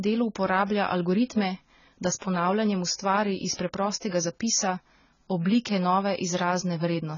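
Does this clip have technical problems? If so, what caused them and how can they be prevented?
Yes. Throughout the speech the codec is starved of bits, likely heavy AAC compression at a rate that fits about 16 kbps AAC-LC. It discards everything above 7 kHz and coarsely quantises the rest, so the sound is dull and smeared, with a warbling, fizzy edge on sibilants. Encoding at a higher bitrate prevents this.

Pre-echo appears from 3.53 to 3.59 s. The transform spread its quantisation noise across a block holding a sharp attack, so about 58 ms of hiss runs ahead of that onset and softens it. A higher bitrate or an encoder with working block switching prevents it.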